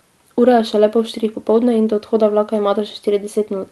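Nothing stood out on listening to this speech, which comes through the WebRTC call path with the ordinary character of its codec and a top end that stops around 12 kHz.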